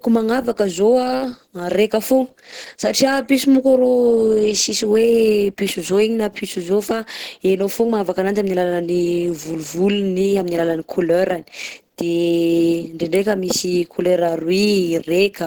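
Throughout the speech the sound is muffled and hoarse, with a grainy roughness that is plainly audible. This is likely Opus compression in its hybrid speech mode, at a bitrate consistent with about 16 kbps, where sparse bits coarsen the spectral detail despite content reaching 20.1 kHz.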